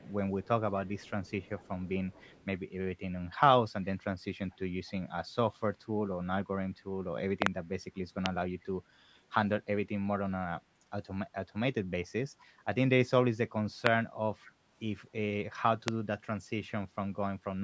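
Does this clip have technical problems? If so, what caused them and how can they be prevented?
Yes. Echo leak: a faint delayed copy of the speech trails it by 228 ms, about 25 to 40 dB below the direct sound, at 0.00–0.48, 0.86–2.45, 4.50–4.92, 7.94–7.98, 8.61–8.65, 12.40–12.46 and 14.43–14.52 s. The likely cause is a far-end loudspeaker feeding its own microphone, with that echo canceller failing to remove all of the returned signal. Prevention: the far end should use a headset or better acoustic echo cancellation.

Loud pop: sharp transients about 20 to 25 dB above the signal, a double pop at 7.42–7.49 s, then single pops at 8.26–8.28, 13.87–13.89 and 15.88–15.90 s, with speech continuing underneath. These are likely voltage spikes from a loose plug, a switch, static discharge or a driver glitch, shaped by the downstream circuitry. Prevention: secure the connectors, ground the equipment and update the audio drivers.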